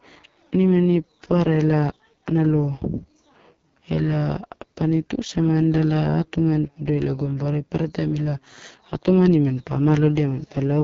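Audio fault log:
Throughout: AMR wideband (HD Voice) codec. The speech has the rough, raspy edge this codec gets when it's run near the bottom of its rate range, and the damage here is heavy, which fits the 6.6 kbit/s mode. The codec rebuilds speech from a pulse-excited model of the vocal tract, and at that rate there just aren't enough bits to track the voice closely. There's nothing above 6.8 kHz, and the top band is only a wash of shaped noise.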